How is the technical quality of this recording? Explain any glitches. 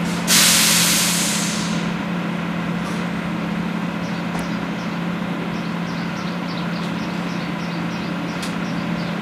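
An electrical switching spike at 4.39 s is the one glitch: a sharp snap, peaking around -15 dBFS and sitting on top of the sound. It is likely a nearby switch or static discharge arcing briefly, with the audio line picking up the burst.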